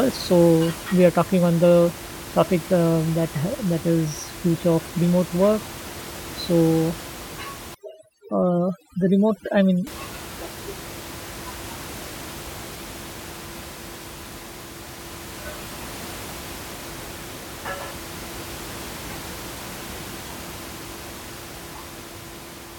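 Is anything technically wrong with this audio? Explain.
Yes. From 7.75 to 9.87 s the speech shows overdone noise removal. A noise reducer set too hard pushes any frequency band near its noise estimate almost to nothing, so the room noise, which elsewhere sits about 16 dB below the speech, collapses into near silence with twinkling specks. Unlike codec swirl, the artefacts follow the vanished background and last only for this stretch.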